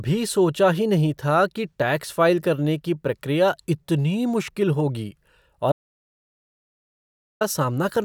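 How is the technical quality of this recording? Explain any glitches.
The recording has one clear glitch: an audio dropout to silence from 5.72 to 7.41 s, losing about 1.69 s of speech. The input was likely lost while writing continued as silence. Unlike a natural pause, the speech cuts off abruptly and the gap holds no room tone at all.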